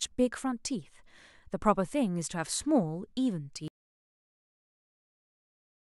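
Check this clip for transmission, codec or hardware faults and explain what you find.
The speech runs until 3.68 s, then cuts to silence that lasts to the end, about 2.3 s. This is an audio dropout to silence. Even the room tone vanishes, so the output is plain silence, not a quiet passage. The likely cause is that the input was lost, through a disconnected device, a failed link or a mute, while the recorder kept writing samples. Whatever was said after the cut is missing.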